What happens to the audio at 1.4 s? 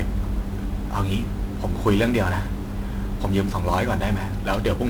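At 1.4 s, as throughout, the speech carries heavy 1-bit DFPWM compression: one bit per sample nudges an adaptive level, leaving fuzzy, crackly broadband noise that buries the treble in hiss.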